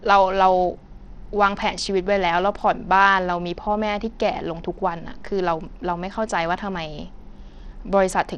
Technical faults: Bluetooth SBC compression

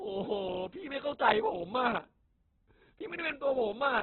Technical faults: Opus compression

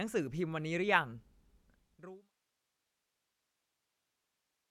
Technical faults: none

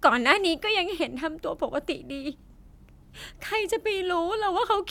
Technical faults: none

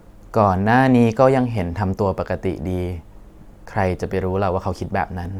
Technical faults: none

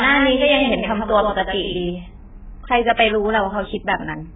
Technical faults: AAC compression; doubled audio track; pre-echo

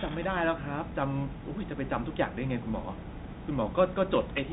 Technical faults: Bluetooth CVSD headset codec

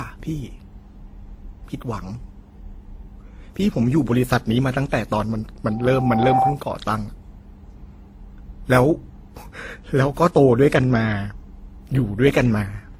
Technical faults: transcoding between lossy codecs; loudspeaker feedback squeal

